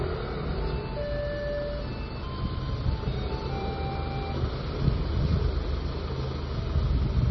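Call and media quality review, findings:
MP3 compression, heavy, throughout the clip. Treble gone above 5.9 kHz; watery, swirling texture; metallic chirps on bright transients; smeared attacks. Likely cause: low-bitrate MP3 encode, damage level fitting roughly 24 kbps; encoder cuts the band and drops weak lines frame to frame. Spectrogram: flat hard ceiling at 5.9 kHz for the full length, patchy blocks flickering below it. Waveform: softened onsets.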